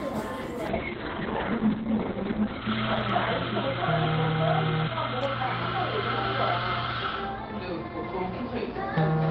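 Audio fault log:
0.69 s to 9.31 s, call bitrate drop: the sound turns coarse and muffled as the top end falls from 20 kHz to 4 kHz, which fits the encoder dropping from near 32 kbps to 7 kbps. A spectrogram goes blank above 4 kHz, worst for 1.68 s.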